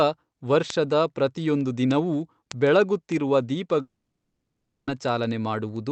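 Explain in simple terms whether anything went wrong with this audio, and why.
Something did go wrong. The speech cuts out at 3.81 s and returns at 4.89 s. That gap of about a second is a long network dropout, likely caused by sound packets that never arrived during the call. The receiver tries to cover the gap by stretching the last bit of sound into a short fading buzz. It soon gives up and leaves near silence. When the speech resumes, the missing part is simply gone. The call codec is working as designed, and it limits the sound to below 8 kHz.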